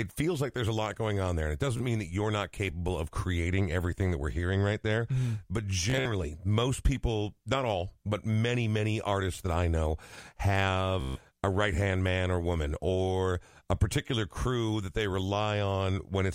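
Bluetooth stutter occurs three times in the speech: at 1.77 to 1.81 s, 5.90 to 6.08 s and 11.01 to 11.19 s. Late or lost packets make the receiver repeat its last short slice, giving a buzzing stutter. About 30, 120 and 150 ms of audio go missing before playback resumes further on.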